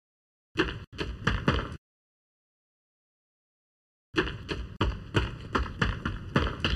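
Channel delay (comb filtering) runs throughout the clip: one channel trails the other by under a millisecond, and the mono sum cancels at evenly spaced frequencies, the first near 700 Hz and then every 1.4 kHz or so, leaving the sound hollow and phasey.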